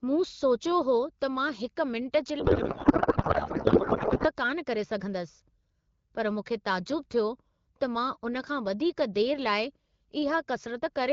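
A speech clip over what sounds like AMR wideband at a clear, mid-range rate, and from 2.39 to 4.27 s the speech turns into garbled, warbling noise that barely tracks it: a codec payload misread. The pattern fits octet-aligned AMR packing being decoded as bandwidth-efficient, so the decoder pulls parameters from the wrong bit positions until the framing lines up again.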